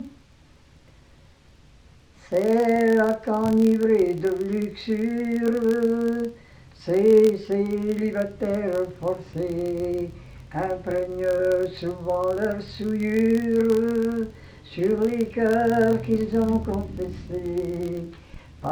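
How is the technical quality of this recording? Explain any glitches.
The recording has one fault that lasts the whole clip. A filter restarted on every block runs from start to finish: the filter discards its memory at each block boundary and begins from silence, so each block opens with a small transient. These repeat at 43.1 Hz, which fits a 1024-sample block. They form a low buzz or rapid ticking that gets louder and quieter with the signal.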